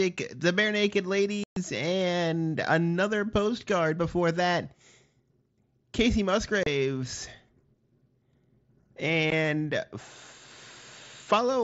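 Abrupt holes cut the speech at 1.44–1.57 s, just before "and another postcard before", then at 6.63–6.67 s and 9.30 s: unconcealed Bluetooth headset packet loss, with missing voice packets replaced by silence or an idle pattern.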